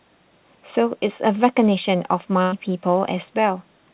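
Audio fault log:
2.42–2.54 s, burst of packet loss: a run of packets never reached the playout point in time, so the receiver stretched the last received sound across roughly 100 ms while fading it down, heard as a brief held, decaying sound rather than a clean gap. When audio returns, about 100 ms of the speech has been skipped. The narrowband call path, with nothing above 4 kHz, fits a 64 kbps G.711 link.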